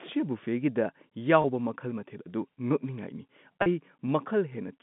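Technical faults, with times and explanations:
1.42–1.44 s and 3.62–3.66 s, packet loss with pitch repetition: a 20 ms gap, then a 40 ms gap, consistent with one and then two lost packets. Each is bridged by replaying the last pitch cycle, heard as a briefly held, buzzy tone before the sound resumes.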